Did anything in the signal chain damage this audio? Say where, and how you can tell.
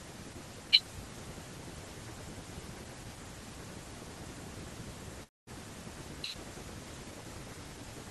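Yes, at the network stage. From 5.23 to 5.50 s the speech stops. The last sound drags on as a fading buzz, then goes silent. Speech resumes with a chunk missing. This is likely a long network dropout, concealed by the receiver.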